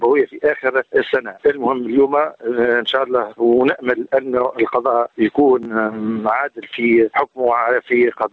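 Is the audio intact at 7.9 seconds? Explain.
No. Gain pumping runs through the whole clip, including 7.9 s: the gain swings around 15 dB as it ducks under loud sounds, squashing loud and soft parts closer in level, likely from excessive gain hitting a fast limiter.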